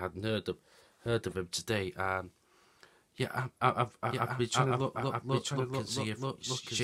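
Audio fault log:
4.11 s to end: doubled audio track. A second full-band copy of the sound cuts in abruptly, trailing the original by about a second at roughly 5 dB quieter, with no decay or room colour. This is likely a slower second capture path or an out-of-step edit.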